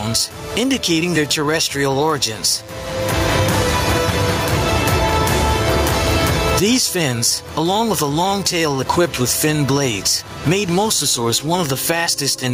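Throughout the clip, the gain swings by about 25 dB, pulled down under each loud sound, leaving everything squashed: gain pumping, likely from gain set far too high into a fast limiter.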